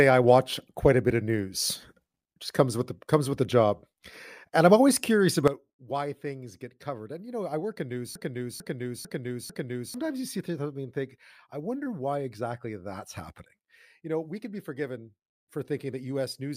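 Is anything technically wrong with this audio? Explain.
Yes, the speech has two faults.

At 5.48 s, just after "I'm always curious", there is a sudden gain jump. The level drops by about 12 dB and stays down to the end. The speech and the background noise fall together, in a single step with no fade, which points to a gain change likely applied without a ramp. On the waveform the envelope narrows abruptly at that sample. On a spectrogram every band, noise floor included, darkens at once along a sharp vertical edge.

From 8.15 s to 9.94 s there is a broken-record loop. A 0.45 s fragment repeats exactly, four times back to back. That is the sound of a stream that likely stalled and kept replaying the last piece it held, and the audio meant for that span is lost. The waveform shows the same shape copied end to end. The spectrogram shows an identical block tiled four times, with hard joins at each seam.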